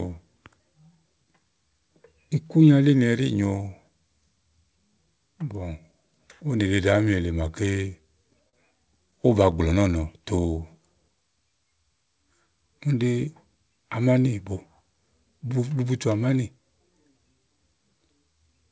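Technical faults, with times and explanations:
8.49–8.55 s, short stall from a late packet. A packet arrived late and the jitter buffer ran dry. The receiver held the last sound for about 38 ms instead of going silent. When the packet came in, playback picked up where it left off, so nothing is missing. Everything after this point runs about 38 ms later than before. The held sound is a brief drag with a slight buzz or dip, heard against the call path's 8 kHz ceiling, which fits G.722.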